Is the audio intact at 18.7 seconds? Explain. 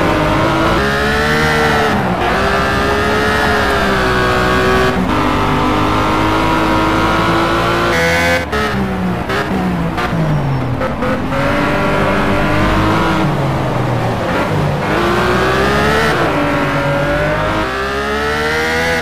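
Yes, at 18.7 seconds the audio is intact, with no dropout, click, distortion or other fault audible at that moment.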